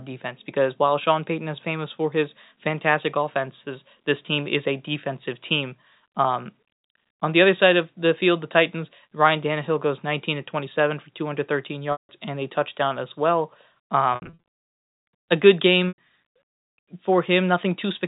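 Packet loss with pitch repetition strikes at 11.92 s for 170 ms, just before "and a touchdown as". It recurs at 14.15 s, scattered over 280 ms, and at 15.88 s after "a good", for 100 ms. Each gap loops the last pitch period, which fades into silence before the speech returns with a short cross-fade.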